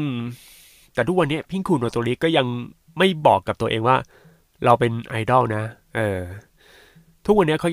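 No technical faults can be heard in this speech.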